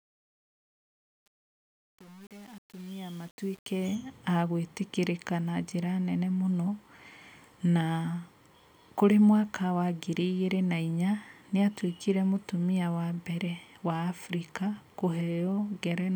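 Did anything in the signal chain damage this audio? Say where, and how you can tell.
Yes. The fade-in from 0.0 to 3.95 s shows truncation distortion from an undithered gain stage, consistent with roughly 7-bit resolution: gritty texture, stair-stepped waveform, broadband speckle on the spectrogram.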